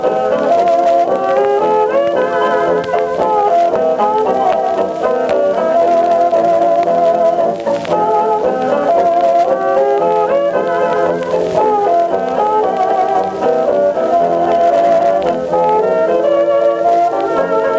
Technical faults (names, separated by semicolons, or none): gain pumping